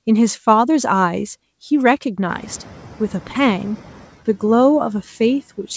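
A speech recording with a noise suppressor catching up. Around 2.5 s the room noise jumps by roughly 20 dB. The suppressor's noise estimate lags behind. From 2.28 s the noise passes through with too little reduction. Over about 1.76 s it sinks by about 6 dB as the estimate adapts, settling by 4.04 s. The band ends at 8 kHz, which fits a G.722 call path at 64 kbps.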